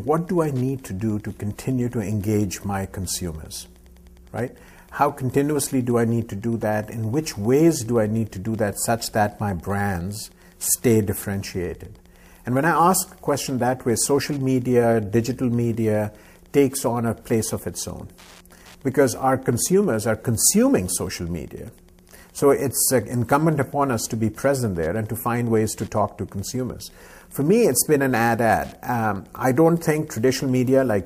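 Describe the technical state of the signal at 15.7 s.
At 15.7 s, as throughout the clip, Wi-Fi interference is present: the circuit rectifies a nearby radio's beacon every 102.4 ms, giving a faint steady ticking roughly 40 dB below the signal, seen as evenly spaced thin vertical broadband lines on a spectrogram.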